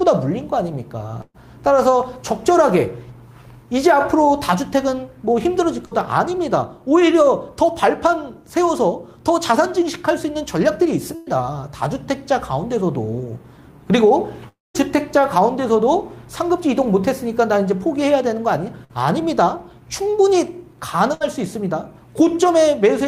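Bursts of packet loss at 1.21–1.36 s, 5.86–5.93 s and 11.15–11.28 s: the receiver stretches the last sound into a fading buzz or hiss, and the audio resumes 60–120 ms further on.

Around 14.48–14.76 s, the sound is briefly held and then drops to near silence. About 260 ms is gone, likely a long network dropout.

Further bursts of packet loss at 18.84–18.93 s and 21.14–21.22 s each skip about 60 ms, with a short fading fill before the audio resumes.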